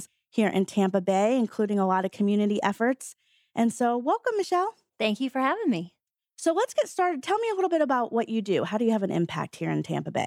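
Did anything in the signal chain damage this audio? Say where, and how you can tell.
No, none of the stages from capture to playback left any audible damage on this audio.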